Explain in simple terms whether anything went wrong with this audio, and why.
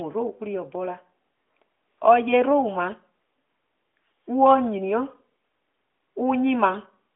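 Nothing went wrong here: the speech was carried by an ordinary AMR narrowband mobile codec, which squeezes it into the narrow band a phone call uses, roughly 250 Hz to 3.5 kHz, so its thin, telephone-like sound is simply how a normal mobile call sounds.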